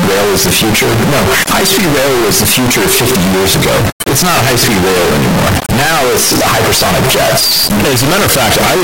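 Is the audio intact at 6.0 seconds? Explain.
No. At 6.0 s, as throughout, the speech is blaring, harsh and nearly square-edged, with background noise as loud as the talking. Likely float read as integer: 32-bit float samples interpreted as 32-bit integers.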